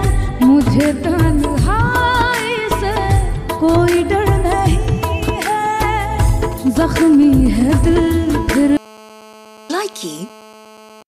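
A 2G mobile phone close to the recording chain starts transmitting partway through this audio, and the circuitry demodulates its radio pulses into the signal path. From 6.19 to 7.71 s the phone is only exchanging signalling with the network, so the interference comes as GSM signalling bursts: short clusters of brief 217 Hz buzzes in a galloping dit-dit-dit rhythm, sitting roughly 20 dB under the wanted sound. From 7.84 to 11.03 s the phone settles into a call and transmits in bursts 217 times a second. The rectified pulses then produce a steady GSM phone buzz, a hard, raspy 217 Hz tone dense with harmonics. It runs about 24 dB below the wanted sound and has no relation to it.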